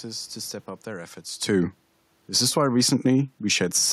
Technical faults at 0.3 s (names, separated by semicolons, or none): none